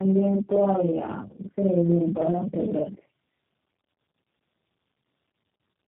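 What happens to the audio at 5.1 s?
A doubled, slapback quality is present at 5.1 s, as it is across the whole clip. This is channel delay (doubling): one channel trails the other by about 46 ms, which fits a 2048-sample buffer, and summing them to mono makes the late copy audible as a second voice.

The speech is also rough, muffled and warbly, with nothing above 3.9 kHz. That is tandem speech coding: the signal was decoded and re-encoded by several low-rate speech codecs in a row, and each one compounded the damage left by the last.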